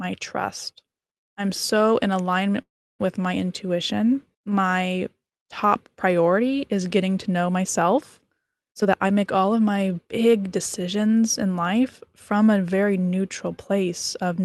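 Call audio freeze, 2.61 to 3.01 s: after "I'm so in alignment", 0.33 s of silence, likely from late packets, then "with my" resumes.

Jitter buffer speed-up, 8.69 to 11.03 s, after "getting to know myself": pitch-period cuts drain an overfull buffer; speech runs 16% faster, same pitch.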